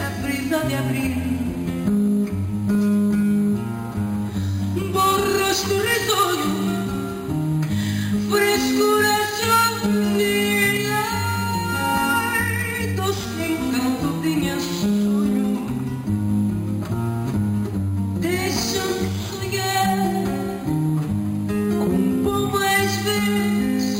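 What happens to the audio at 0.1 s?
At 0.1 s the audio already carries imaging from sample-and-hold upsampling, and it runs through the whole clip. The rate was raised by holding each sample with no smoothing filter, which fits a jump from about 11 kHz to 48 kHz. Mirrored copies of the spectrum appear above the original band. The first sits between about 5.5 and 11 kHz, roughly 16 dB below the sound. It is heard as a bright metallic fizz that tracks the level of the sound.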